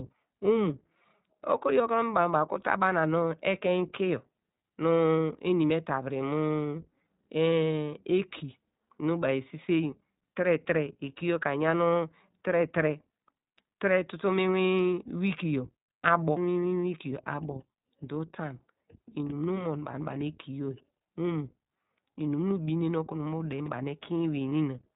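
Speech runs through the iLBC codec throughout: nothing above 4 kHz survives, and the plainly audible rough, synthetic texture fits the 15.2 kbps mode with 20 ms frames. Lost iLBC frames at 19.92 to 19.95 s and 24.50 to 24.52 s each leave a brief buzzy, held-vowel fill where the decoder repeated the last pitch cycle over one missing 20 ms frame, recovering immediately afterwards. At 23.6 to 23.68 s, chunks out of order produce a short jumbled moment: a 20 ms chunk plays three chunks late, creating hard joins without losing any audio.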